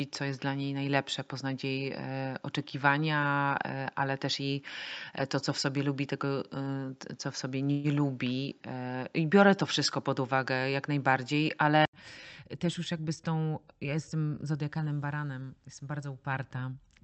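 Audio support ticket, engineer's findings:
Input switched to a poorer device, 0 to 11.93 s: dull, band-limited sound, likely a fallback mic or headset call profile. Spectrogram shows nothing above 7.6 kHz and a noise floor roughly 45 dB down. At 11.93 s, an 80 ms flat gap in the waveform, then a level step of roughly 5 dB as the sound clears.

Call audio freeze, 7.71 to 7.87 s: a brief buzzy continuation of the preceding sound, likely from delayed packets emptying the jitter buffer. The receiver filled 126 ms with decaying concealment, visible as smeared, repeating harmonics. Nothing lost; playback delay grew by 126 ms.

Jitter buffer speed-up, 12.17 to 13.46 s: speech runs hurried at unchanged pitch, 109% speed. The buffer trims excess delay by cutting pitch-period chunks, about 150 ms in total. The waveform shows slightly compressed syllables and a denser spectrogram time axis, with formants unshifted. 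Opus path noted.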